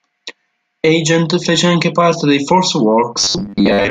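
Speech, with robotic sound from repeated short buffers from 3.19 s to 3.90 s. For most of that stretch the same 10 ms slice loops, imposing a rigid 100 Hz metallic buzz, likely from audio arriving too seldom. The waveform shows identical 10 ms cycles, and a spectrogram shows flat horizontal harmonics spaced 100 Hz apart.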